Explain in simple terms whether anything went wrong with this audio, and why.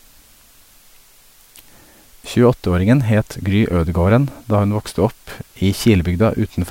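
A steady, even hiss runs under the speech from the very start to the end, with no crackle or distortion. The fault is low bit depth with dither. The audio was stored with very few steps of loudness, about 8 bits, so each sample had to be rounded. A small random noise was added before rounding, which turns the rounding error into a smooth, constant hiss instead of harsh distortion. That hiss sits well below the speech level throughout.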